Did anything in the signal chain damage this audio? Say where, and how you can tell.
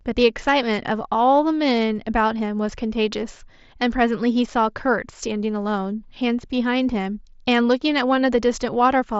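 No, nothing in this speech stood out on listening as damage from any stage of the chain.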